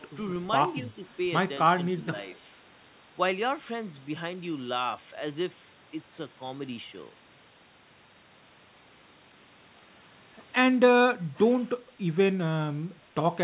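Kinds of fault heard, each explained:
Speech suppressed in double talk: between 1.98 and 2.15 s the speech level sags briefly, by roughly 5 dB at its deepest, over about a tenth of a second in all. This is likely the echo canceller treating near-end speech that overlapped far-end sound as echo and turning it down. On the waveform the envelope pinches into a short, shallow notch. On the spectrogram, whose content stops near 4 kHz throughout, that slice looks slightly fainter across the band.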